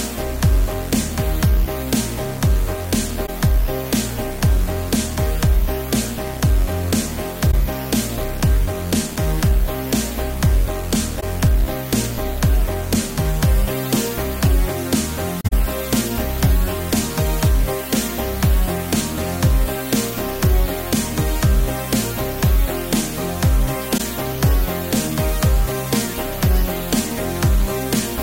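Corrupt frames concealed by the decoder occur at 3.26–3.29 s, 7.52–7.54 s, 11.20–11.24 s, 15.41–15.53 s and 23.97–24.01 s. Each time, the decoder detected damaged AAC data and filled the gap with a muted or scrambled stand-in. The longer 15.41 s gap points to several consecutive frames lost.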